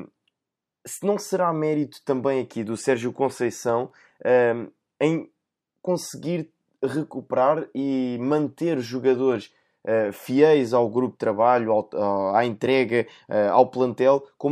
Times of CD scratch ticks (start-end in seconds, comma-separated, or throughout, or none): 3.69-4.10